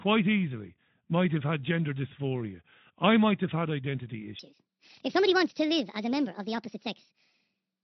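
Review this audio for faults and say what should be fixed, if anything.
From 4.39 s to the end, the speech is a section at the wrong speed: it runs 1.57 times fast and about seven semitones high, likely from being fitted to the wrong clock. Pitch and tempo jump together, unlike a pure pitch shift, which leaves timing intact. Confirm each segment's sample rate matches the project clock before joining segments.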